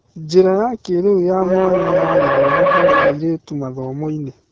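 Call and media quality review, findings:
AMR wideband (HD Voice) codec, whole clip: speech rough and raspy, hiss-like top end. Sounds like one of the two lowest AMR-WB modes, fits 8.85 kbit/s. Too few bits for the pulse model, so the excitation turns coarse; 6.4 to 7 kHz is noise fill.

Feedback howl, 1.41 to 3.33 s: tone near 500 Hz, peaking about 5 dB above speech, loop delay roughly 200 ms. Two devices in one room on the call, loop gain above unity, so the tone builds until the loop breaks.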